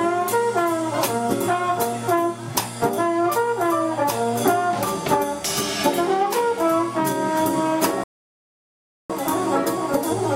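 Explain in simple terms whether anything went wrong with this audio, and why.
At 8.04 seconds the sound suddenly drops into silence and stays silent for about a second, until 9.10 seconds, when it picks up again exactly where it left off. Nothing is skipped or repeated; the pause simply stretches the clip by about 1.06 seconds. This is a rebuffering stall: the player used up all the audio it had downloaded so far and had to wait for more to arrive before it could carry on playing.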